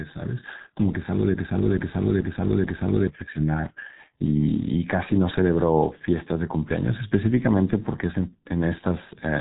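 Speech runs through a G.723.1 codec from start to finish, with nothing above 3.8 kHz and heavy codec damage. The hoarse, smeared consonants, fitting a bitrate around 6 kbit/s from slow 30 ms frame updates, set it apart from a simple low-pass filter, which muffles without roughening.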